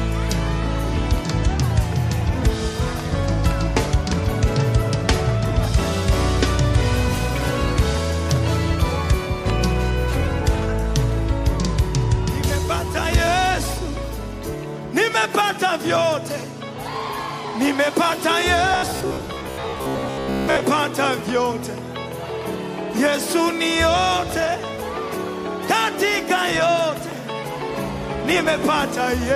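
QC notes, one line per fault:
18.7 to 20.6 s, robotic sound from repeated short buffers. The audio becomes a rigid metallic buzz near 67 Hz that loosely follows the material. Most of this stretch is repeated fragments about 15 ms long, likely from a starved buffer looping its last block.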